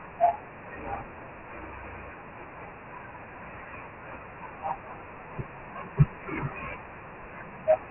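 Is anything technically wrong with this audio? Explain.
Yes, the whole recording carries Dialogic VOX ADPCM coding, and it's pretty heavy. Nothing comes through above 3 kHz, so the speech sounds boxed-in and phone-like. The 24 kbps rate at 4 bits per sample fits a 6,000-samples-a-second VOX file. Each sample is stored only as a coarse 4-bit step from a prediction, so the encoder can't track detail finely. That leaves a gritty hiss riding along with the speech from start to finish.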